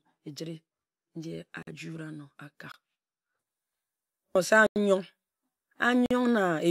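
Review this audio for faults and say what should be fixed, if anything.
Four blocks of digital silence cut into the speech: 1.63 to 1.67 s (46 ms), 2.72 to 2.74 s (22 ms), 4.67 to 4.76 s (93 ms) and 6.06 to 6.11 s (46 ms). Each is a hard dropout, as the signal jumps to zero and back with no fade. The 46 ms gaps fit a 2048-sample buffer and the 93 ms gap fits two, pointing to output buffers left unfilled in time. On a waveform each shows as a flat line; a spectrogram shows a blank vertical stripe. To prevent it, give the audio thread more buffer headroom or processing priority so every output block is filled before its deadline.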